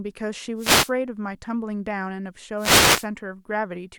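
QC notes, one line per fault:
0.56–0.92 s and 2.56–3.07 s, wireless microphone noise hit: two short swishes of static, about 0.36 s and 0.51 s long. The analogue FM radio link faded as reflected signals cancelled, so receiver noise rose over the voice.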